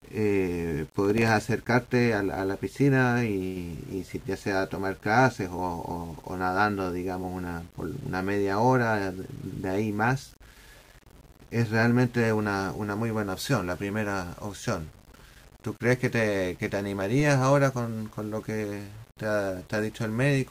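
Low bit depth without dither runs through the whole speech recording: quiet passages turn gritty and the faintest tails sputter, with grain tracking the signal at around 30 dB below it, likely from rounding to something like 8 bits with no noise added to decorrelate the error. Processor overload crackle tears through 1.05 to 1.28 s as a quick burst of clicks, where roughly seven short buffers of about 1.5 ms each seem to have missed their deadlines and dropped out as hard-edged silent gaps.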